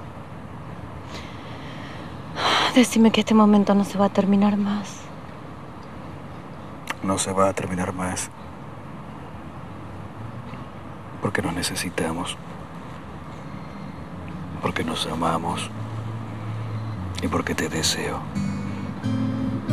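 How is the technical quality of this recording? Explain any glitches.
Nothing to flag here, as no glitches turn up anywhere in the recording, so there's nothing that needs explaining.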